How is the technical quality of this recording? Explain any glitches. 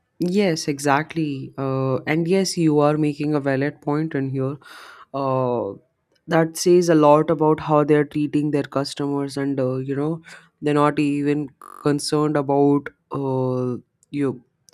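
The recording has one clear glitch. From 11.63 to 11.82 s, a system hang loop occurs: playback stalled while the hardware kept replaying one 21.3 ms buffer, which fits a 1024-sample buffer, nine times over. The short loop produces a brief buzz at about 47 Hz, with essentially no speech lost.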